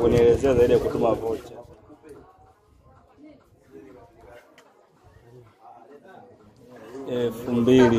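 A gain change applied in coarse steps without smoothing causes zipper noise from 1.2 to 1.64 s, where the level drops about 20 dB in 2 dB jumps, and again from 6.4 to 7.72 s, rising about 20 dB in 1 dB jumps, both at around 30 steps a second. Each jump clicks, so a fast ticking rides on the sound while the level moves.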